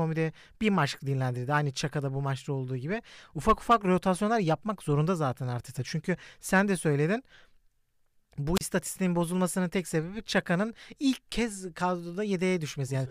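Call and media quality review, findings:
Brief rise of hiss, then a near-silent hole of about 34 ms before speech resumes, 8.55 to 8.62 s. Wireless microphone squelch dropout: analogue FM radio link fades, and the receiver squelch mutes the output until the signal recovers.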